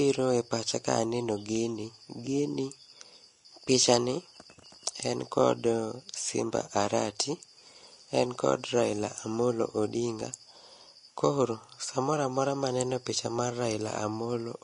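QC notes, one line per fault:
Throughout, Vorbis compression: likely low-quality Vorbis encoding, consistent with roughly 35 kbps, discards everything above 10.6 kHz and quantises the remaining treble coarsely, so the speech sounds dull yet hissy and grainy, its fine detail replaced by noise, with blurred consonant attacks.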